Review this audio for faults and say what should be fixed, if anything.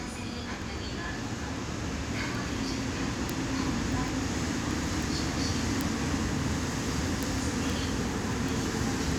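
There's a run of word clock ticks through nearly the whole clip, from about 0.15 s to 9.12 s. They're sharp clicks of uneven strength at a steady rate of roughly one every 0.15 s, so around fifty in all. That regularity points to a receiving device running on its own clock rather than locked to the sender. The two clocks are apart by something on the order of 150 ppm, and each time they slip past each other a single sample gets dropped or repeated. Fix it by slaving the receiver to the incoming digital signal or putting both devices on a shared word clock.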